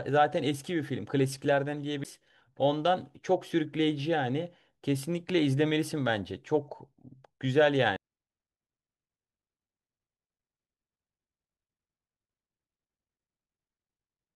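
CD skips at 2.04 s and 7.96 s in this speech clip: each is a brief mute, about 10 ms and 3 ms respectively, then the playback jumps to another turn of the disc's spiral.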